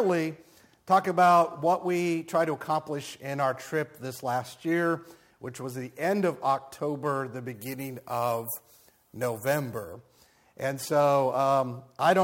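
From 7.54 to 9.93 s the sound turns thin, bright and sibilant: pre-emphasis left on. The treble boost applied before recording or transmission was never undone by the matching de-emphasis, here following the FM 50 µs curve, so 10 kHz sits about 11 dB above 1 kHz. Unlike a simple low-cut or a presence-peak EQ, the lift is a smooth shelf that keeps climbing into the top octave, so sibilance grows while the low end stays intact.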